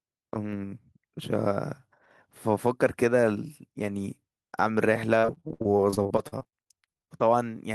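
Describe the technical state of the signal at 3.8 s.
At 3.8 s the speech signal is intact, with no audible technical fault.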